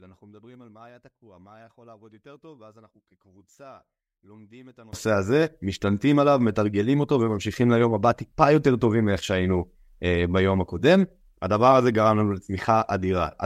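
From 0.00 to 4.93 s the speech collapses by about 28 dB to a faint residue when heard in mono, likely from one channel inverted, so the centred content cancels. The waveform sits nearly flat there, and the spectrogram is almost empty.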